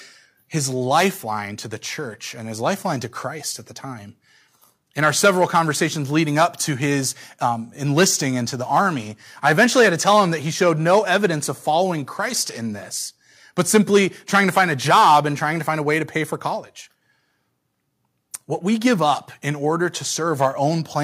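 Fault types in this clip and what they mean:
Nothing to flag here, as the speech comes across without any technical faults worth listing.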